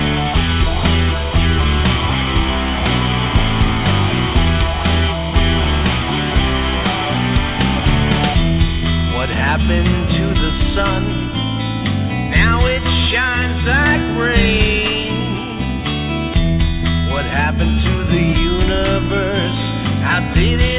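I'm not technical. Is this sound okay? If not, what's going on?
Yes, nothing here is faulty.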